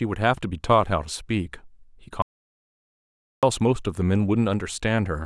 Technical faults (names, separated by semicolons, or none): audio dropout to silence